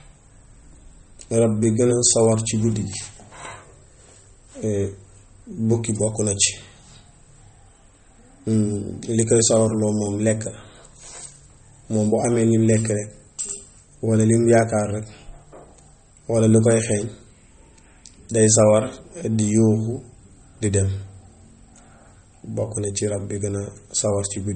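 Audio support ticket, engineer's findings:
Watery, swirly speech throughout, metallic chirps on s sounds, smeared attacks, nothing above 8.4 kHz. Likely MP3 compression: starved encoder zeroing weak frequency lines frame to frame and cutting treble, consistent with roughly 32 kbps.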